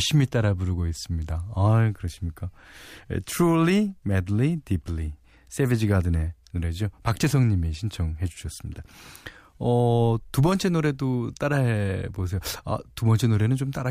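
No technical faults are audible anywhere in this recording.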